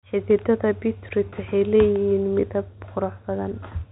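Speech over a narrowband telephone-style path, with one packet-loss-with-pitch-repetition glitch from 1.30 to 1.32 s: roughly 20 ms gone, fitting a single lost packet, bridged by a briefly held, buzzy repeat of the last pitch period.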